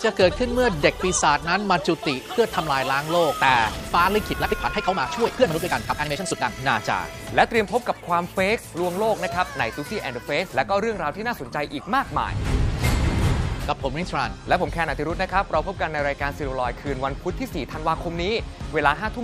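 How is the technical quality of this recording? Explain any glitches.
The recording has one glitch, a time-stretched section from 4.27 to 6.61 s. Across those 2.3 seconds the audio suddenly runs at about 1.9 times its normal pace while its pitch stays unchanged. This is likely processing software squeezing the passage to fit a shorter length, keeping the pitch by discarding short slices and joining what remains. The result sounds rushed, with the pace jumping abruptly at both edges.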